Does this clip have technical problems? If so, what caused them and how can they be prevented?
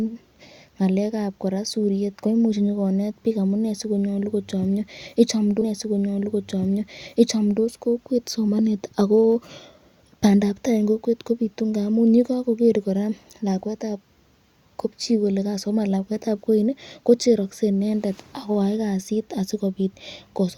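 Yes. At 5.61 s the speech jumps back with a small blip and two seconds replay, running again to 7.61 s. This is a stream segment repeated: the player fetched or queued the same two-second segment twice. Tracking segment sequence numbers and discarding duplicates before playback prevents it.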